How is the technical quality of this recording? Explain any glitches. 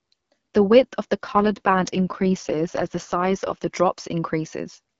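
The recording is speech carried over the AMR wideband (HD Voice) codec, clear at its normal rate, with one stretch of degraded quality.

From 1.25 to 3.68 s there is an AMR rate drop. The voice turns rough, raspy and synthetic, which fits the codec stepping down from 12.65 to about 6.6 kbit/s while spending more bits on error protection for a weak radio link. Unlike a switch to narrowband, the audio stays just as wide. Unlike packet loss, there is no gap or dropout. The harshness lasts until the rate recovers.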